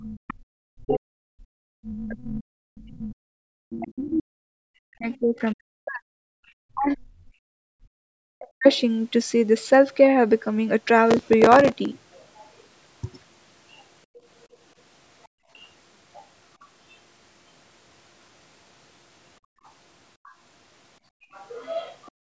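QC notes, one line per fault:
0.03–8.67 s, speech suppressed in double talk: when both ends spoke at once, the echo canceller likely could not tell the near talker from the loudspeaker echo and attenuated everything together. The speech dips, thins and breaks up across roughly 7 s of this span, at its deepest about 40 dB down, so syllables vanish or arrive as hollow fragments while the far side is active.
2.12–5.52 s, 8.72–8.80 s, 12.13–16.94 s, 19.65–22.11 s, other side's voice leaking through: the far-end signal played on the loudspeaker was not fully subtracted from the microphone, likely because the canceller's echo estimate fell short. A second voice sits under the talker at about 25, 30, 35 and 15 dB below the speech respectively. It is plainest in the last stretch, and only a brief scrap around 8.7 s.
6.34–6.45 s, 14.06–15.5 s, 19.4–22.33 s, background gated by the echo canceller: during loudspeaker playback the canceller clamped the microphone hard to suppress residual echo. 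The room tone drops out abruptly and returns when the suppression releases. The drops reach about 39, 32 and 33 dB, lasting a tenth of a second in the first event, roughly 0.4 s within the second span and roughly 0.7 s within the third.
11.11–11.92 s, processor overload crackle: the processor could not finish its audio buffers on time, and some forty deadlines were missed, with buffers of roughly 3 ms. Each miss replayed a sliver of stale audio with hard edges. Strung together, these splices produce a gritty, tearing crackle that rides on the sound for under a second and stops once the load clears.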